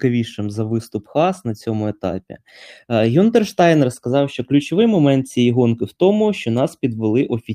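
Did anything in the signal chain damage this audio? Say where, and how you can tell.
No, nothing in the signal chain audibly damaged this speech recording. No stage from capture through to playback leaves a mark that can be heard.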